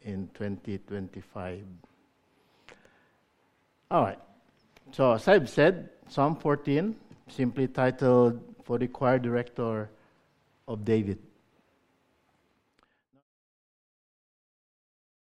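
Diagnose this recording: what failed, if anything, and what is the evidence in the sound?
Nothing failed here; the only notable event is a smooth fade-out that begins around the 12-second mark and settles into silence by 13.24 s, just the way an editor would close out a recording.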